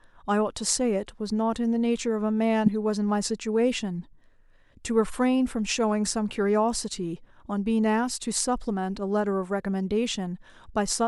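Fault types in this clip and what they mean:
Corrupt frame decoded: some compressed frames picked up flipped bits and the decoder played them anyway, throwing energy into the wrong frequencies. In this speech there's a short, fairly loud blip at 2.66 s and a quieter, longer burst around 8.1 s.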